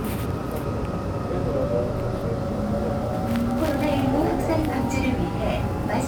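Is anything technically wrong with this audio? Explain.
Yes. From 2.41 s to the end, crude rate conversion adds a gritty, inharmonic fizz about 30 dB below the sound. It fits a 44.1 kHz to 48 kHz change done by repeating nearest samples without filtering. Unlike steady quantisation hiss, it rises and falls with loud, bright moments.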